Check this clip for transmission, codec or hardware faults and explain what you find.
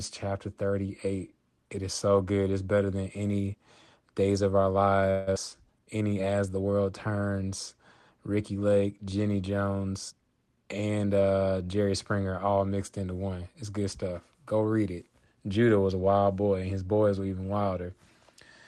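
There are four jitter-related problems here, three of them piled up within about a second of each other, riding on a call path that sounds like Opus with the top end stopping around 12 kHz.

First, a call audio freeze from 5.10 to 5.29 s. The speech stalls and what you hear instead is a smeared continuation of the last sound, a buzzy tail that fades over roughly 166 ms. That's most likely packets held up in transit so the jitter buffer ran dry, and the receiver papered over the hole. Nothing is lost, though. When the packets turn up the speech resumes right where it left off, just later.

Right after, around 5.35 to 5.38 s, there's a skip ahead. Playback jumps forward with barely any gap, and about a tenth of a second of speech simply vanishes, the two sides stitched almost directly together. That's a stretch of audio being dropped while newer material was already queued behind it, which claws back about 100 ms of the 166 ms delay the freeze just added.

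Then from 5.5 to 6.22 s you get a jitter buffer slow-down. The speech plays at about 87% speed but keeps its pitch, so sounds feel stretched. The receiver is repeating single pitch periods and bits of pause over and over to rebuild its reserve, padding in about 102 ms overall.

Finally, a jitter buffer speed-up between 10.09 and 10.96 s. Here it runs at about 118% speed, same pitch, and comes across a bit rushed. The buffer was holding more than its target, so it snipped out short pitch-period-sized chunks repeatedly, trimming roughly 150 ms to bring the latency back down.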